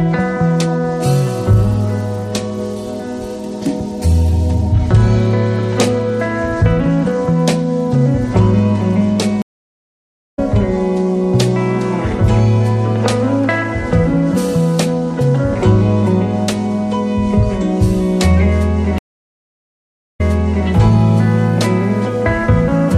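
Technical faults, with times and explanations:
9.42–10.39 s: stream reconnect. The connection drops and the player goes silent for about 0.94 s, then a fresh decoder picks up the live stream roughly half a second further on, so a piece of the sound is skipped. The waveform shows a flat line and the spectrogram a blank vertical band, followed by a muted or faded onset.
18.98–20.68 s: stream reconnect. A 1.2 s silent gap, again a flat waveform and an empty spectrogram column. This time the server resends a burst, so playback resumes about 0.5 s earlier than where it broke off and that stretch is heard twice. The restart fades in gently rather than with a sharp edge.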